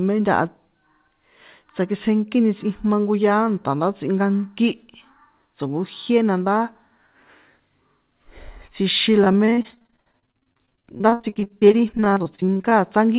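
Speech clip with repeated packet loss (robotic sound) from 9.24 to 12.78 s: dozens of short holes, up to 61 ms, patched by repeating prior sound, leaving about a third of the stretch concealed, so the audio turns choppy with pieces missing. On a spectrogram the stretch shows smeared, repeated frames and abrupt breaks, and the waveform shows stuttering copies, all below the 4 kHz ceiling of the G.711 call path.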